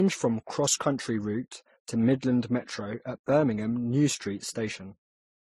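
Throughout the speech nothing sounds above 13.2 kHz, and the different artefacts of three codecs are heard together. A single low-bitrate codec gives one consistent texture, so this points to transcoding between lossy codecs, likely HE-AAC, then MP3, then Vorbis.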